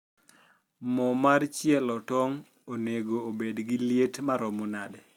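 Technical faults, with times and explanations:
No technical faults detected.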